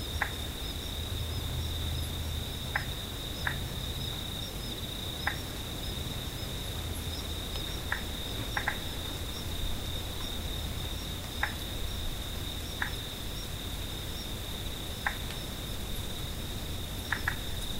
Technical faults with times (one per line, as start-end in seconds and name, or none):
none